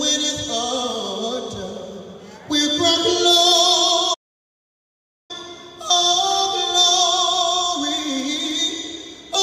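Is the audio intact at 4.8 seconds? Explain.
No. A playback stall silences the sound from 4.14 to 5.31 s, about 1.15 s, likely the player starving for data; one long halt, unlike brief clicky dropouts.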